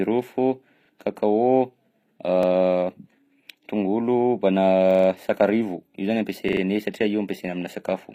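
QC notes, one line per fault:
Throughout, HE-AAC compression: the treble sounds bright but fake, with gritty, lispy s sounds and nothing above 15.5 kHz. This is likely a low-bitrate HE-AAC encode, where the top end is copied up from lower bands, so its harmonics don't line up.
0.85 to 6.61 s, repeated buffer: a 43 ms chunk plays twice at 0.85 s and 2.43 s, five times from 4.91 to 5.08 s, and four times from 6.49 to 6.61 s. Each repeat has a hard join, so it stutters without skipping ahead. The chunk length fits a 2048-sample buffer.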